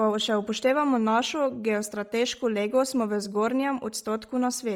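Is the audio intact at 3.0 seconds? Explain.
No. At 3.0 s the speech carries heavy coding damage that runs through the whole clip, most likely Bluetooth LC3 compression. Upper bands sound noise-filled rather than detailed, giving a breathy, grainy edge, which fits a 32 kbps stream with 10 ms transform frames.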